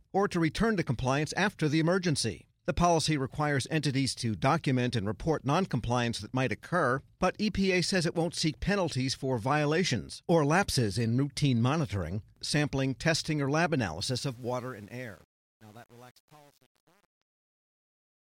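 Right after "sampling testing or lab", at 14.00 s, the speech starts fading out, and from about 14.3 s to the end at 18.36 s the truncation distortion on the fade is at its worst. The gain stage is throwing away low bits without dither, which fits an 8-bit path, so as the level sinks toward the smallest step the waveform collapses into coarse square steps. The tail turns gritty.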